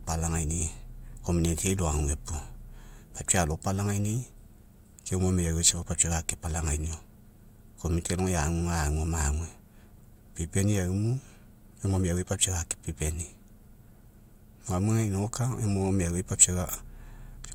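Nothing technical to flag in this short speech recording; it comes across without any audible fault.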